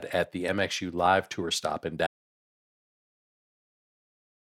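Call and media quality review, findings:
Audio dropout to silence, 2.07 s to end of clip. Speech cuts off right after "stop in"; remainder is silent, no room tone, content lost. Likely input loss (device disconnect, link failure or stray mute) while recorder kept writing silence.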